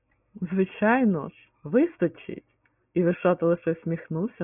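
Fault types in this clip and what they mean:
No technical faults can be heard in this speech recording. Nothing in the audio calls for a fault listing.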